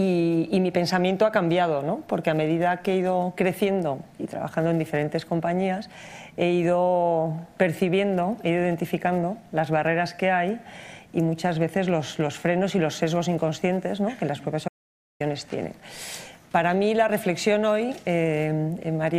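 At 14.68 s there's an audio dropout to silence, about 0.52 s of silence until 15.20 s, likely from the input briefly disconnecting while recording continued.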